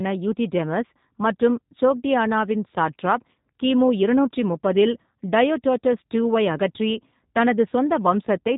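From start to finish the speech sounds muffled and slightly rough and synthetic, with nothing above 3.8 kHz. That is G.729 codec damage, plainly audible, and points to G.729A at 8 kbit/s, which rebuilds the speech from a vocal tract filter, a pitch predictor and a few pulses per frame.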